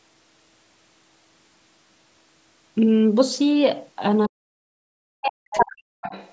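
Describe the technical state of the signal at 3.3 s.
At 3.3 s the speech signal is intact, with no fault at that moment; the band-limiting to 8 kHz and the bass roll-off from the call microphone processing are normal for that path.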